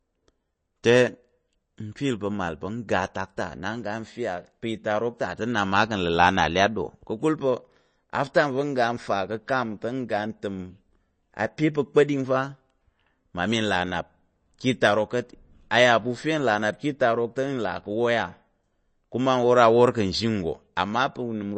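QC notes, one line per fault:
Throughout: MP3 compression, likely. The speech has nothing above about 8.3 kHz, so it comes across dull, and the damage is plainly audible: a watery, swirly texture with a metallic chirp on the s sounds and softened attacks. That points to an encoder starved of bits, which fits a rate around 32 kbps, cutting the treble off hard and dropping quiet frequency detail that then flickers in and out from frame to frame.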